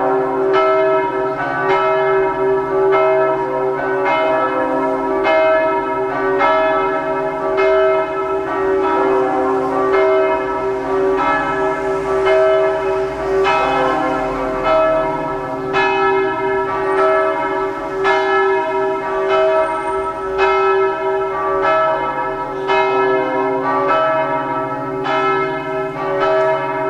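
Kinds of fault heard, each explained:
No technical faults heard.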